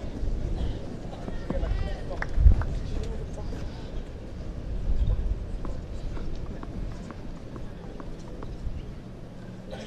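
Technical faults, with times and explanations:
No technical faults can be heard anywhere in the audio.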